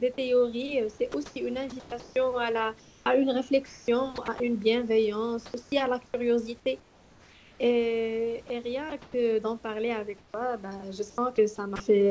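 Speech over a call path whose 8 kHz ceiling fits G.722 at 64 kbps, with room noise about 32 dB below the speech. Between 1.12 and 4.40 s, 8.48 and 9.14 s, and 10.18 and 11.80 s the sound is chopped by the voice detector, likely because the sender kept toggling transmission on and off. About 960 ms, 160 ms and 280 ms respectively are swapped for synthetic fill, so quiet edges break up. At 5.46 s an 80 ms span is sound dropped by the voice detector. About 40 ms of real sound is lost and steady noise stands in until transmission resumes, likely because the detector mistook a soft stretch for background. From 5.46 to 7.60 s, comfort noise replaces the background for roughly 1.06 s in total. The room's natural texture gives way to a flat, featureless hiss during the pauses, the likely result of discontinuous transmission with the receiver generating fill noise.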